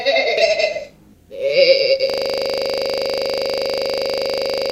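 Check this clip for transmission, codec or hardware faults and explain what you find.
Two faults are audible in this recording of everyday sounds.

The first is damaged data in a compressed stream, from 0.38 to 0.43 s. Some of the encoded bytes there were corrupt. The decoder could not read those frames correctly. It lost sync and had to hunt for the next valid frame header. The result is a brief disturbance lasting about 50 ms.

The second is a system hang loop. It starts at 2.10 s and runs to the end of the clip. The system stalled, but the audio hardware kept replaying its ring buffer. The same 40 ms slice of sound repeats 66 times. This gives a rigid, rough buzz at 25 Hz, with no new sound coming through. The slice is short enough that the repeats merge into a stuttering drone.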